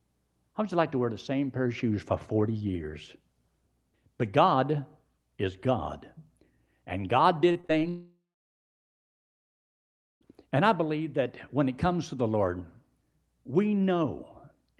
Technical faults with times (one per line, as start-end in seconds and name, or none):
7.51-7.83 repeated packet loss (robotic sound)
7.89-10.27 long network dropout